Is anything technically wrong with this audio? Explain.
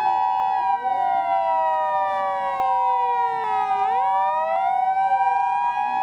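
Yes. At 0.4, 2.6, 3.44 and 4.56 s the sound skips ahead, losing roughly 40, 70, 100 and 40 ms. The likely cause is a dropped buffer (overrun), where samples were overwritten before being read. Unlike an underrun, no silent gap is heard.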